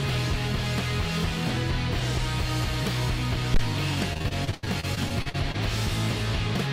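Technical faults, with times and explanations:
3.54 to 3.61 s, phantom power thump: a supply was switched on a live input, and the voltage step passed through the coupling capacitors into the signal. The result is a single deep thump that dies away within about 15 ms.
4.13 to 5.56 s, repeated packet loss (robotic sound): packets kept arriving lost or late, and each hole was filled by extending the preceding sound. About a quarter of this stretch is patched, with gaps up to 82 ms, making the audio choppy with pieces missing.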